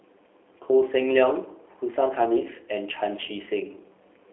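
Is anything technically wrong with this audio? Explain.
Yes, the whole clip has been through a G.729 codec, and it's plainly audible from start to finish. G.729 doesn't store the waveform. It sends a description of the vocal tract filter, a pitch estimate and a few pulses per frame, and the decoder rebuilds speech from those, consistent with a low-rate mode around 8 kbit/s. You get a telephone band of roughly 300 Hz to 3.4 kHz with nothing above it, so the speech sounds boxed-in, slightly rough and synthetic.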